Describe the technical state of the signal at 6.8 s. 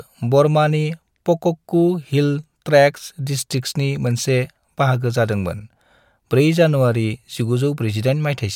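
At 6.8 s the speech signal is intact, with no audible fault at that point.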